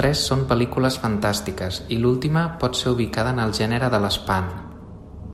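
No technical faults are audible.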